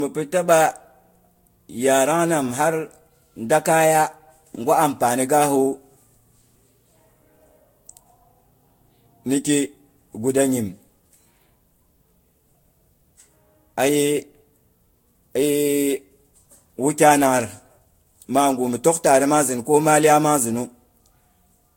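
The speech sounds swirly, smeared and hollow from start to finish, with blurred consonant attacks and nothing above 16.7 kHz. This is likely generation loss from about four lossy passes. The sound points to Vorbis at roughly 60 kbit/s, each pass adding fresh quantisation noise.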